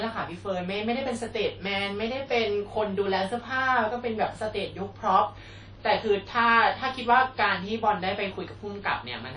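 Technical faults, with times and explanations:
Throughout, WMA compression: the speech carries a ringing, washy texture with a hiss that rises and falls with the signal, and nothing is present above 10.1 kHz. This is likely a transform codec working with long blocks: quantisation noise is smeared across tens of milliseconds around each sound, and weaker spectral detail is discarded. The hard band limit and plainly audible damage point to a bitrate around 32 kbps.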